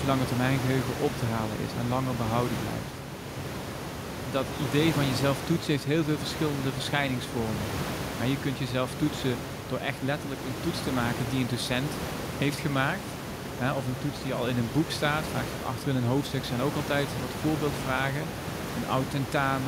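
No technical faults are present.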